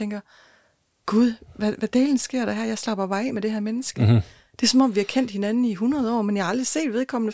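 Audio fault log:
No faults are audible anywhere in this speech clip.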